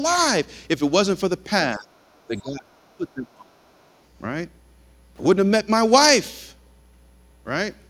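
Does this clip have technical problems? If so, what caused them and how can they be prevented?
Yes. The speech dips sharply at 1.76–1.87 s, 2.27–2.65 s and 2.96–3.5 s, by about 15 dB and at worst about 25 dB. This is likely speech suppressed in double talk: the echo canceller turned everything down while both sides spoke. Tuning the canceller for better double-talk detection, or using a headset, prevents it.

Faint scraps of a second voice, roughly 35 to 40 dB below the speech, appear at 2.13–2.2 s and 2.38–2.42 s. This is likely the other side's voice leaking through, loudspeaker playback the canceller didn't fully remove. Lowering speaker volume, or using headphones, prevents it.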